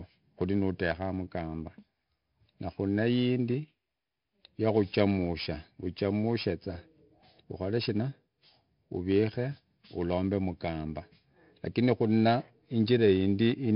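Throughout the speech, 4-bit ADPCM compression leaves a gritty hiss that rises and falls with loudness, unlike steady background noise, and roughens sharp attacks. Nothing reaches above 5.3 kHz, which fits a rate near 44 kbps and a low sample rate.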